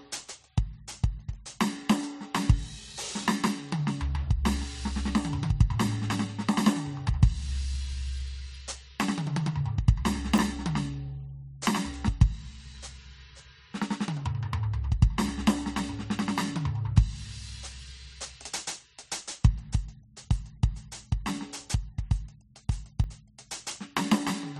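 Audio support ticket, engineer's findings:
Dropped buffer (overrun) at 10.38 s and 23.04 s. Symptom: abrupt forward jump in the music, no gap of silence; roughly 70 ms skipped at 10.38 s, around 40 ms at 23.04 s. Likely cause: capture side not draining the input buffer before hardware overwrote it, so each lost block is discarded and the surrounding audio is spliced edge to edge. Probable component: capture thread scheduling or undersized buffering.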